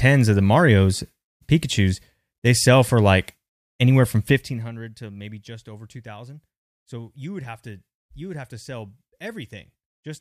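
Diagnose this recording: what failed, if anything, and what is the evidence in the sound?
Zipper noise at the gain stage, between 4.28 and 4.72 s, just after "for like anywhere from" and before "to maybe just over". The level drops by roughly 20 dB in unsmoothed steps about a hundred times a second, so each step ticks audibly. Unlike a smooth fade, the level change carries a fine buzzing texture. Unlike random crackle, the ticks are evenly spaced and occur only while the level moves.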